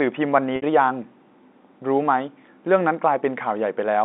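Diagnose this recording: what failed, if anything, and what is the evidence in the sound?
Network stage: packet loss with pitch repetition from 0.56 to 0.62 s, a 60 ms gap that fits three 20 ms packets. The receiver looped the last pitch period, heard as a brief held buzz. A spectrogram shows frozen, flat harmonics fading out, and the waveform shows identical shrinking cycles.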